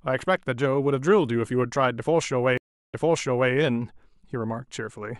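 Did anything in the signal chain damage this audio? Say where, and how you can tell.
Yes, a stream reconnect at the network stage. At 2.58 s the sound goes silent for 352 ms. It then resumes 601 ms earlier, repeated by the server.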